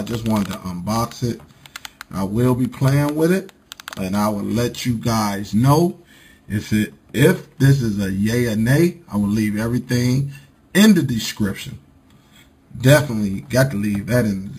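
The sound points to 11 kHz audio raised to 48 kHz without smoothing. Imaging from sample-and-hold upsampling mirrors it into 5.5 to 11 kHz, about 20 dB down: metallic fizz that follows the sound.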